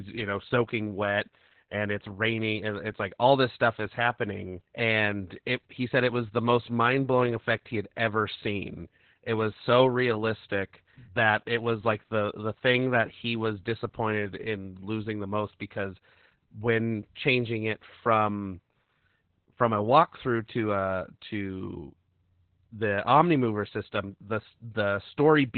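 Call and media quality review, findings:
Opus voice compression throughout: speech muffled, hoarse, slightly robotic; spectrogram empty above 4.4 kHz. SILK narrowband mode with coarse excitation coding, consistent with about 8 kbps.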